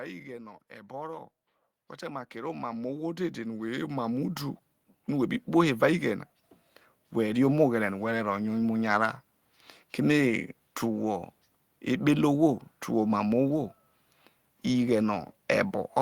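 From 0.68 s, just after "ighe no", voice and background swell together by about 16 dB until 4.46 s: automatic gain rising, the AGC slowly boosting input it judged too quiet.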